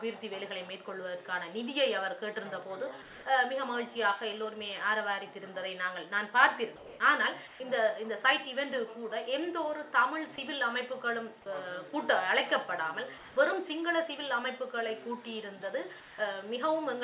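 Comfort noise in place of the background appears at 3.02–3.26, 6.76–7.00, 7.48–7.60, 13.18–13.36 and 16.00–16.18 s. In these pauses the real background gives way to smoother synthetic noise, level-matched or up to about 3 dB quieter. This is likely discontinuous transmission. Sound dropped by the voice detector occurs at 10.36–10.38 and 11.42–11.46 s. About 10 and 20 ms of sound vanish into steady noise, likely because the detector misread them as background. Nothing above 4 kHz survives the call path, which fits G.711 mu-law.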